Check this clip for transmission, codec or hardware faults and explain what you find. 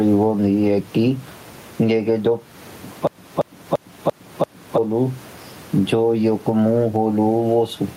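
Two faults are present in this speech clip: gain pumping across the whole recording and a system hang loop in the middle.

Gain pumping runs throughout. The gain swings by roughly 15 dB, likely from excessive input gain feeding a fast limiter, which leaves the dynamics flattened.

A system hang loop runs from 3.07 s to 4.78 s. A 341 ms segment, which fits a 16384-sample ring buffer, repeats five times at about 2.9 Hz, producing a skipping-record effect while around one and a half seconds of audio are lost.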